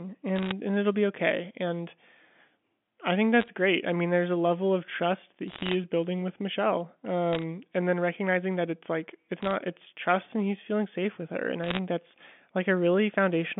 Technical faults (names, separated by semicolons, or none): bit errors on a digital phone line